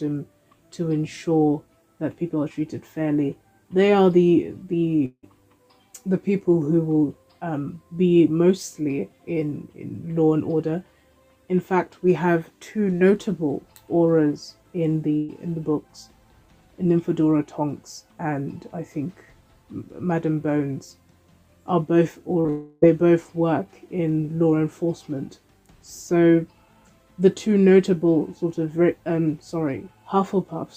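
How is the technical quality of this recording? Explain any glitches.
The recording has transmission glitches in three places: around 5.1 s, around 15.2 s, and a cluster from 22.41 to 22.84 s.

At 5.05 to 5.25 s there's a gap that sounds like a long network dropout. The last sound gets stretched out and fades into about 50 ms of silence, then the audio picks up again with roughly 180 ms gone. That's likely the receiver filling in after nothing arrived.

At 15.17 to 15.31 s there's a burst of packet loss. About 120 ms never got played in time, so the receiver extended the last sound across the hole while turning it down. There's no silence in it, and the audio resumes with that stretch missing.

The 22.4 s cluster starts with short concealed packet loss at 22.41 to 22.47 s (40 ms lost) and 22.47 to 22.50 s (20 ms lost). The receiver bridged each hole by continuing the last sound and blending back into the real audio, which comes across as a quick smear.

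That runs straight into another long network dropout at 22.50 to 22.84 s. The sound is held and drawn out for about 320 ms with no silence, and the audio then comes back with that part gone. This is likely the same kind of extended concealment as the one at 5.1 s.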